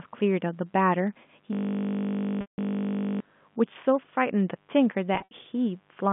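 A speech recording passed through a G.711 A-law telephone line, which limits it to roughly 150 Hz to 3.5 kHz, shows mains buzz: switching spikes from the 50 Hz supply leak in throughout, adding a steady, raspy buzz sitting around 40 dB below the speech. From 1.53 to 3.20 s a system hang loop appears: the computer froze while the audio hardware kept replaying one 20 ms buffer, heard as a steady 50 Hz buzz lasting many repeats. Packet loss with pitch repetition occurs twice. At 2.41 to 2.58 s about 170 ms went missing, and the receiver's repeated pitch period fades into silence. At 5.15 to 5.31 s, 110 ms of losses are scattered across 160 ms, with the longest run 70 ms, which fits 10 ms packets and leaves brief held, buzzy patches.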